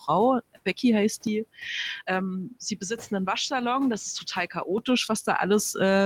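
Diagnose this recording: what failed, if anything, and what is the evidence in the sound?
Input switched to a poorer device from 1.27 to 4.78 s, likely a driver-level switch: the speech loses its upper band, drops about 5 dB, and gains a different noise floor.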